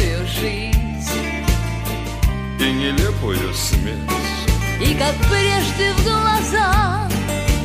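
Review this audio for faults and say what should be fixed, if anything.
Hard clipping runs from 4.49 to 6.85 s, where the signal is driven about 3 dB past what the stage can pass, so the peaks are sliced flat. Those squared-off tops add high harmonics, heard as crackle and grit on the louder moments. To prevent it, set gain so peaks stay below full scale with several decibels of headroom, or put a limiter ahead of the overloading stage.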